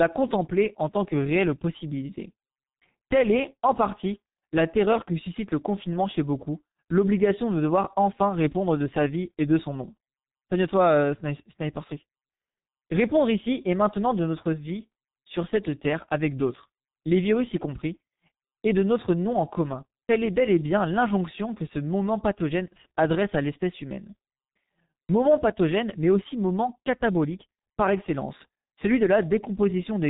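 The speech has been squeezed through a G.723.1 codec across the whole clip, a narrowband telephony coder that models the voice in 30 ms frames. The damage is heavy, at roughly 6.3 kbit/s. Nothing survives above 3.8 kHz, so the speech sounds muffled and boxed-in. Because the voice model is refreshed only once per frame, quick transitions smear, leaving a hoarse texture and blurred consonants.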